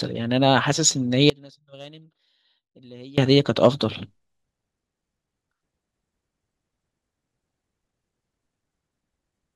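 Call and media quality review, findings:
Audio dropout to a faint residue, 1.30 to 3.18 s. Speech cuts out abruptly for about 1.9 s. Only a faint leak remains, roughly 25 dB under normal level. Likely a signal interruption upstream while the downstream path stayed live.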